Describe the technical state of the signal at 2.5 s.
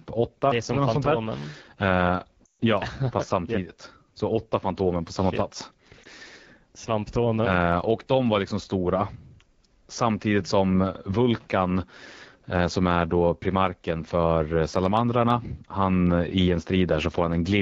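At 2.5 s the audio sits inside a burst of lost AMR speech frames, from 2.45 to 2.52 s, just before "ja fast". The decoder repeats the last good pitch and vocal tract settings at falling gain, so the sound smears and fades quickly toward silence, then returns weak and rough.

Underneath, the AMR wideband (HD Voice) codec is audibly degraded throughout. Speech is modelled only up to 6.4 kHz, with noise filling the band to 7 kHz, and the raspy, coarse texture fits the low 8.85 kbit/s mode.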